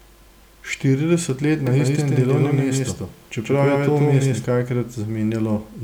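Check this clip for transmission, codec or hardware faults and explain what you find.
One fault is present. A doubled audio track runs from 1.67 s to 4.45 s. The speech is joined by a second, full-band copy trailing about 150 ms behind at roughly the same loudness. The likely cause is the signal being picked up twice, once through a slower path. The copy carries no reverb tail or room colouring, so it sounds like a crisp slapback echo rather than acoustics, and it starts and stops abruptly at those times.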